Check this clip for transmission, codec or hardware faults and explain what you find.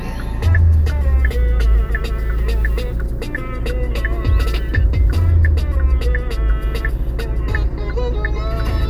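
Nothing found; the sound runs without any audible dropout, glitch or other defect.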